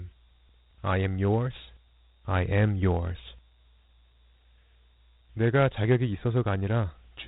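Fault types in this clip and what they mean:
Dialogic VOX ADPCM: the speech has been squeezed through 4-bit adaptive differential coding, at a rate that fits 32 kbps, and the band stops near 3.9 kHz, giving a muffled telephone quality. The coarse step tracking leaves a plainly audible gritty hiss riding on the voice throughout.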